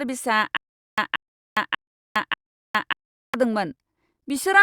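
Stutter with silent gaps from 0.57 to 3.34 s in this speech clip: a 179 ms fragment repeats four times every 590 ms, separated by 411 ms of digital silence, likely a stalled stream replaying its last buffer.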